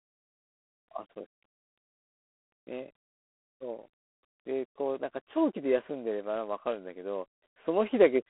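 Speech runs through G.726 ADPCM coding for its whole length. Each sample is sent as a few bits of difference from an adaptive prediction. With so few bits, the quantisation error sits on the signal as a plainly audible, harsh, rasping hiss that rises and falls with the speech level, a coarseness that fits 24 kbit/s. The band is telephone-limited to 250 Hz to 3.4 kHz, with nothing above 3.9 kHz.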